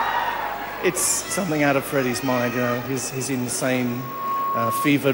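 Loudspeaker feedback squeal runs from 3.87 to 4.90 s: a microphone is picking up its own loudspeaker, and at 1.1 kHz the loop gain tops unity, so that single tone swells over roughly 0.4 s into a piercing squeal about as loud as the sound itself.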